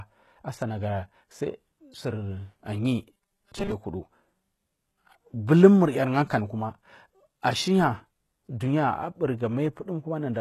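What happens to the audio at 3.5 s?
From 3.13 to 3.72 s the speech turns into a rigid, metallic robotic sound, most likely from repeated short buffers. A 5 ms slice of audio is replayed in place of newer audio, with roughly half the audio repeated, imposing a fixed 200 Hz buzz. Unlike a stutter, where audible chunks repeat, these repeats are too short to hear separately and fuse into that steady buzz.

Across the whole clip, including this moment, the audio carries plainly audible damage from likely HE-AAC compression at around 16 kbps. Only the lower spectrum is coded, and the treble up to 12.3 kHz is rebuilt by copying lower bands upward. Unlike a plain low-pass, this leaves treble that is present but not the original, so its harmonics do not line up.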